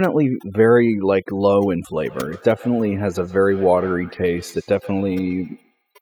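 From the start, overdone noise removal shapes the whole clip. A noise reduction stage set far too aggressively has pushed individual frequency bands down or off whenever they sat close to its noise estimate, taking the quieter parts of the speech with them. The background drops to near silence scattered with twinkling specks.

From 1.93 s to 5.86 s, a feedback echo between two devices appears. A second device in the same room is replaying the call, its sound reaches the first microphone again, and that device's echo canceller cannot remove audio it did not play itself. Each syllable returns at a steady interval of roughly 150 ms, each pass thinner and more ringing, peaking about 22 dB below the speech. Unlike room reverberation, the repeats arrive as distinct, evenly spaced copies.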